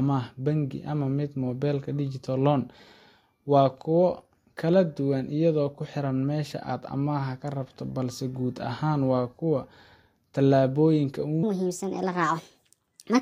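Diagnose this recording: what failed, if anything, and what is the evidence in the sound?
The final stretch fails. From 11.43 s to the end at 13.22 s, the speech plays too fast, a section at the wrong speed. It runs at 1.42 times its recorded rate. Pitch rises with it, by about seven semitones. Speed and pitch shift together, and abruptly. That points to the playback or editing stage, not the codec. The likely cause is a clock mismatch, with that segment read out at too high a rate.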